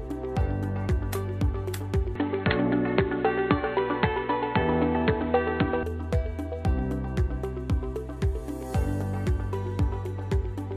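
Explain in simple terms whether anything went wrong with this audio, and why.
From 2.15 to 5.83 seconds the sound turns dull and muffled, with faint new background noise. The likely cause is an input switched to a poorer device.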